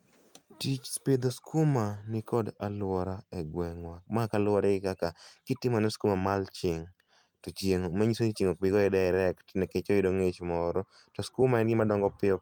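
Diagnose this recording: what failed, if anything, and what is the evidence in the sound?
Clock drift between sender and receiver at the network jitter-buffer stage: the sender's clock runs slow by roughly one and a half percent, so the buffer drains continually. Unlike random packet loss, every hiccup pushes the same way.

Repeated timing corrections from 0.46 to 11.94 s: the receiver keeps repeating short pieces, slowing the speech to 98% and adding about a fifth of a second.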